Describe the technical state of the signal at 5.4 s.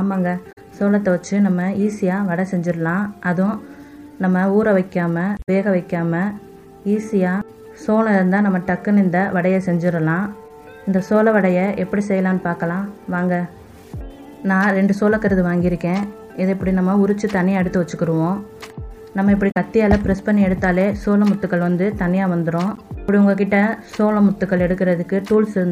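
At 5.4 s the signal is inside a burst of damaged data in a compressed stream, running from about 5.34 to 5.49 s. Corrupted bytes there cause the decoder to misread the affected frames, lose sync and hunt for the next valid frame header, producing a short blip or squawk of roughly 0.15 s. On a waveform this appears as an abrupt discontinuity. A spectrogram shows a narrow vertical block of garbled, smeared energy.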